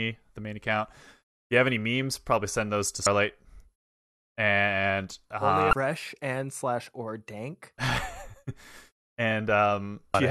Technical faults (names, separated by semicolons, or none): damaged data in a compressed stream